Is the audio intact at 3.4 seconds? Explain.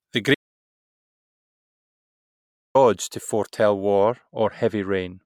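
Yes, the audio is intact at 3.4 seconds, with no audible fault at that moment.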